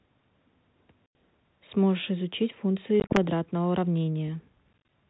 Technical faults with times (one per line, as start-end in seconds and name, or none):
1.06-1.15 packet loss on an ADPCM call
3.00-3.18 packet loss on an ADPCM call
4.73-4.90 packet loss on an ADPCM call